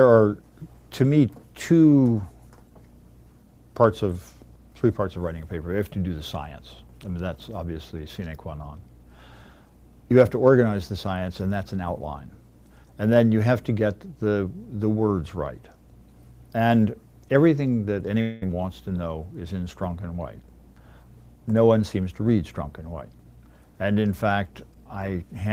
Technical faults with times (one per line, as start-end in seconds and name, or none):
18.21-18.44 long network dropout